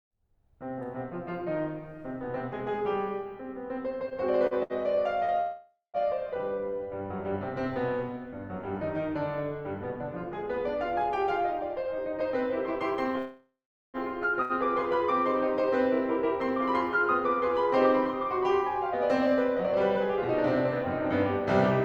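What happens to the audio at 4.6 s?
At 4.6 s the music is inside a run of repeated stalls (stutter) lasting from 4.09 to 5.32 s. Packets arrived late, so the jitter buffer drained four times, and the receiver held the last sound, fading it over the longer waits, before resuming. About 163 ms was padded this way, the longest hold being 68 ms, roughly 13% of that span. Nothing is lost, but the passage hesitates and drags audibly.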